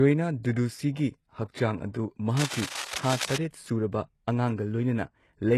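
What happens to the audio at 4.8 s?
At 4.8 s, as throughout the speech, the fault is low-bitrate audio saved at a high bitrate: nothing sounds above 12.3 kHz, and smeared, swirly low-bitrate artefacts persist, likely because a very low-bitrate HE-AAC-style encode was re-encoded as high-bitrate MP3, which cannot restore what was discarded.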